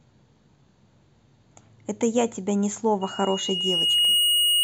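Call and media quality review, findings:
Loudspeaker feedback squeal, 3.01 s to end of clip (4.64 s). Single 2.9 kHz tone swelling over about a second to roughly 5 dB above speech. Probable cause: mic-to-speaker acoustic loop, gain above unity at 2.9 kHz. Differs from steady electrical whine because it builds from nothing.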